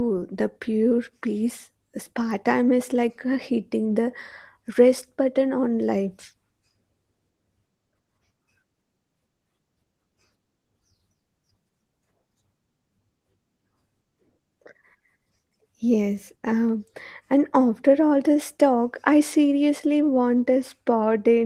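No technical faults can be heard anywhere in this speech recording, which carries only the light, expected character of Opus voice compression running in its hybrid mode with the full audio band kept.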